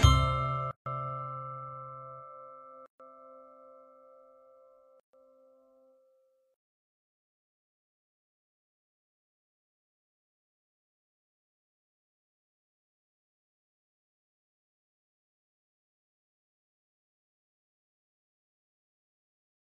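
Gaps at joins of encoded pieces at 0.71, 2.86 and 5.00 s, about 2 s apart, each 136 to 150 ms long: untrimmed encoder delay and last-frame padding open silences with smeared edges before the sound resumes.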